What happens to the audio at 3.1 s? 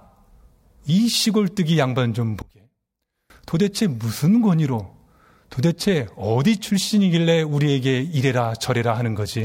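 Likely one channel inverted, 2.42 to 3.3 s: reversed polarity on one side cancels the shared sound in the mono sum, leaving the speech about 28 dB down.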